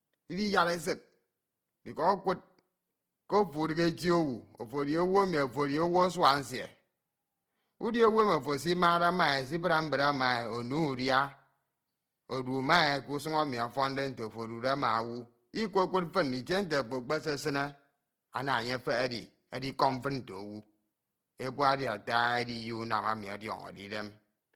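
A speech clip with Opus compression damage running through its whole length. The sound is plainly degraded. Tonal parts come out rough, grainy and noisy rather than clean. There is little of the swirling, hollow quality that spectral holes bring. Content still reaches up to about 20.3 kHz, so the band is full. This points to the codec's music (CELT) mode, which likely filled starved bands with folded or noise energy at a low rate, consistent with roughly 16 kbps.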